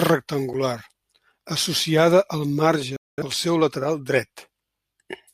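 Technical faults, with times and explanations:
0.53 s, block of digital silence: for about 8 ms the speech drops to silence and then resumes, with no fade on either side. The output buffer was most likely not filled in time, so its samples went out as zeros. Because the waveform jumps straight to silence and straight back, the hole is too short to hear as a gap and comes across as a single sharp tick.
2.96 to 3.22 s, digital broadcast dropout: after "associada al" the speech fades out over about 3 ms and stays silent for roughly 213 ms, returning at "pel seu lateral". The receiver stopped getting decodable frames and muted until good data arrived again. That length fits about five lost frames. Whatever was said in that stretch is gone rather than just quiet, so the sentence skips ahead.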